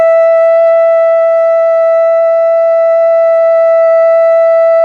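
There are no technical faults to describe anywhere in this music.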